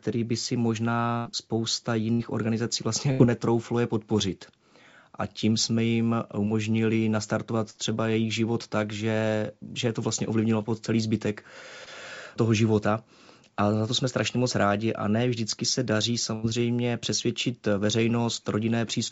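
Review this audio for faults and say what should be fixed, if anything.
Burst of packet loss occurs at 1.18–1.27 s, 3.11–3.21 s, 7.70–7.77 s (just before "třeba jejich život tak") and 16.34–16.45 s (just after "ne vždycky se daří"). At each point, roughly 40 to 80 ms of speech never arrived, and the receiver stretched the last sound across the hole while fading it. On a spectrogram this appears as smeared, repeating harmonics or blurred noise that dims before the next syllable resumes. The waveform shows a decaying envelope. Stronger forward error correction or redundancy, together with a jitter buffer deep enough to absorb late packets, would prevent these dropouts.

Short concealed packet loss occurs at 11.85–11.88 s, between "ovlivnilo po celý zbytek" and "toho života a za". About 20 ms went missing and was patched by extrapolating the preceding sound, which produces a brief smear or wobble. 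A spectrogram shows a thin vertical seam where the filled segment blends back in. Better network prioritisation for the audio stream (QoS marking) and a little more buffer headroom would prevent this.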